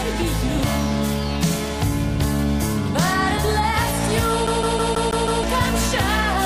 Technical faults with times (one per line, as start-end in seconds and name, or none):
4.47-5.43 CD stuck on one turn